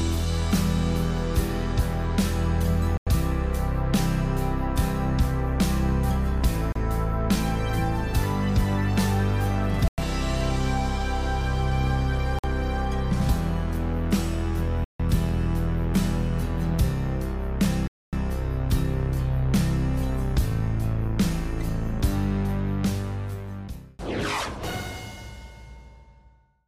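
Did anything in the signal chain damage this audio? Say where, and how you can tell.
Yes: a likely Bluetooth stall at the wireless playback link let the headphones' buffer run dry, cutting the sound to silence for 30 to 250 ms at 2.97, 6.72, 9.88, 12.39, 14.84 and 17.88 s.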